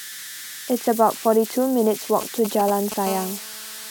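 A whistle near 2 kHz, with grainy noise under the quieter parts, runs through the whole speech recording at about 14 dB below the voice. These are converter idle tones: an undithered delta-sigma converter, given little input, settles into repeating bit patterns that produce audible tones.

From 2.21 to 2.94 s a galloping dit-dit-dit of short buzzes breaks in, roughly 10 dB below the speech. These are GSM signalling bursts, short groups of radio bursts from a nearby 2G phone, pulsing at 217 Hz, that the audio circuit rectifies.

From 3.07 s to the end a hard, raspy 217 Hz buzz with many harmonics sits about 17 dB below the voice, unrelated to it. This is GSM phone buzz: the phone, now in a call, transmits 217 bursts a second, and the circuitry demodulates them continuously.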